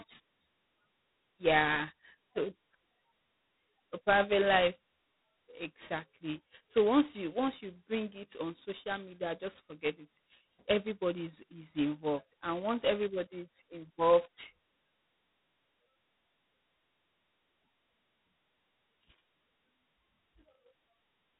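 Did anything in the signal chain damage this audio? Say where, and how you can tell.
Yes, at the codec stage: it's G.726 ADPCM, and heavily damaged. From start to finish nothing gets past about 3.9 kHz, and a harsh, rasping hiss rides the speech's level. That fits the 16 kbit/s mode, where only two bits per sample code each prediction error.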